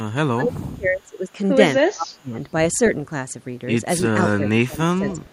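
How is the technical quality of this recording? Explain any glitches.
The quality is compromised by two kinds of call-processing glitch in the speech.

Speech suppressed in double talk, 0.33–1.38 s, 1.79–2.37 s and 4.37–5.22 s: the echo canceller likely mistook overlapping talk for loudspeaker echo and clamped down. The voice drops sharply, by up to around 30 dB in the first two stretches and about 20 dB in the last.

Echo leak, 4.21–4.34 s and 5.10–5.33 s: the far end's echo canceller likely let part of its loudspeaker pickup through. A faint copy of the voice returns 284 ms late, roughly 20 to 25 dB below the speech.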